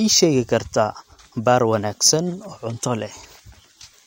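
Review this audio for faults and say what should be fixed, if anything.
No faults heard; nothing needs fixing.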